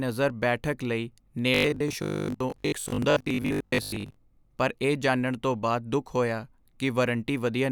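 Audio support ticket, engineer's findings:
Robotic sound from repeated short buffers, 1.54 to 4.16 s, ending just before "ਪਰ ਇਹ ਜਾਣਨ ਤੋਂ". Speech turns into a rigid metallic buzz at 50 Hz. Likely a playback buffer underrun. About half the audio is skipped, and repeats of a 20 ms chunk fill the gaps.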